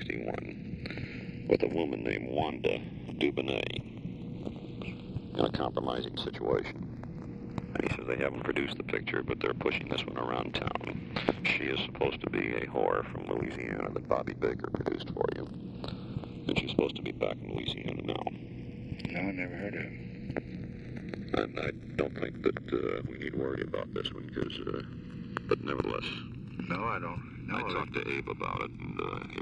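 Throughout, the channels drift apart: clocks about 50 ppm out slide the inter-channel delay to roughly a millisecond, sweeping mono comb notches as slow flanging, seen as drifting spectrogram stripes.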